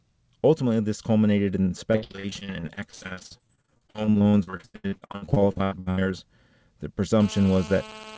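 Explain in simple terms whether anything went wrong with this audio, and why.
Right after "this culminated in", from 1.92 s to 6.14 s, the speech turns choppy and robotic, with small pieces dropping out over and over. This is repeated packet loss (robotic sound). The audio travels in small packets, and dozens of them went missing or arrived too late. Each hole, the longest about 83 ms, was patched by stretching the last bit of sound, so nearly half of that stretch is filler rather than real speech.

From 7.20 s to the end, a hard, raspy buzz sits under the speech, steady and unrelated to what is said. This is GSM phone buzz. An older 2G mobile phone nearby was on a call, sending radio bursts about 217 times a second. The audio circuitry picked up those pulses and turned them into sound, giving a harsh 217 Hz drone with many overtones. The call codec carrying the audio also cuts off everything above 8 kHz, so the sound lacks the crispest highs.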